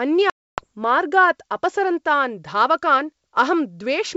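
Packets were dropped on an ADPCM-coded speech call from 0.30 to 0.66 s, losing about 280 ms (around fifteen packets), and the gap was filled with silence. The decoder's predictor and step size drifted from the sender's, so the hard-edged hole ends with speech returning with brief, slight distortion on "मार्गात् अपसरन्तान्", over a G.722 wideband link at 64 kbit/s.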